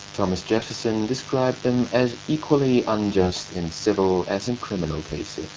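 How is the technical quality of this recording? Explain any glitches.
The recording has two faults: a mains buzz under the whole clip, and two short bursts of AMR bit errors in the speech.

Mains buzz: Throughout, switching spikes from the power supply leak into the audio path twice per cycle of the 50 Hz mains, producing a dense series of harmonics climbing well into the kilohertz range. Sitting only about 10 dB below the speech, it is a constant, raspy buzz.

AMR bit errors: From 0.56 to 0.70 s and again from 3.17 to 3.36 s, the call link corrupted the less protected bits of a handful of consecutive AMR frames. The error rate was around one bit in ten in the first burst and slightly less in the second. The frames still passed their checksum, so the decoder used them, placing its excitation pulses wrongly and misreading fine pitch, gain and spectral detail. The speech keeps roughly its level and pitch but briefly turns hoarse, scratchy and gargly. 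Around these bursts, the AMR-WB coding at 12.65 kbit/s leaves the speech clear.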